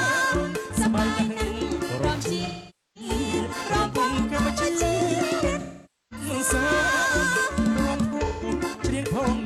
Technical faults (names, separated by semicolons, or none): Wi-Fi interference; AAC frame loss with concealment